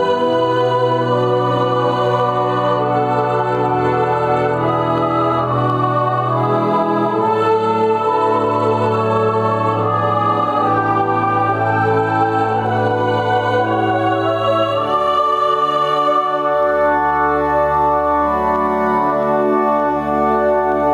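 Gain pumping runs through the whole recording, with the level swinging by around 10 dB. The likely cause is input gain set far too high, with a fast limiter or compressor clamping down on every peak, which squashes the dynamics.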